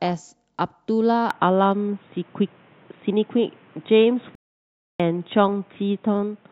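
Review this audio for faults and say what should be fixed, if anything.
Input switched to a poorer device at 1.31 s, lasting to the end of the clip. From that point the speech turns dull and boxy, with a level shift of a few decibels and a new background noise around 35 dB beneath the speech. There is no gap at the change. The recording likely moved to another microphone or a headset's call profile, which passes a narrower band and brings its own tone and noise. Lock the input device for the session and disable automatic switching to headset call modes.

Playback stall from 4.35 to 5.00 s. The speech cuts out abruptly for about 645 ms of silence, then resumes. A gap like this occurs when the player runs out of buffered data or its audio thread is held up, so the output stays silent until it recovers. A starved buffer or a blocked thread is the likely cause here. Enlarge the playback buffer and keep blocking work off the audio thread so it can always refill in time.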